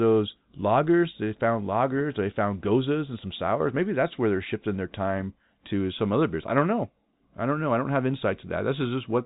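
No faults can be heard in this speech clip. It carries the narrow sound of G.711 telephone coding, with nothing above about 3.8 kHz and only a faint hiss beneath the signal that follows its level.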